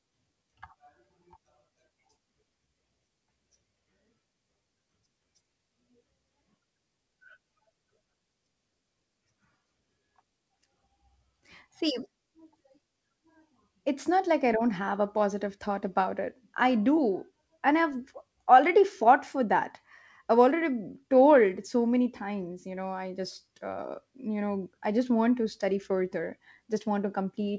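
Speech carried over a WebRTC call path, band-limited at 8 kHz in a way consistent with the G.722 codec, with no technical faults found.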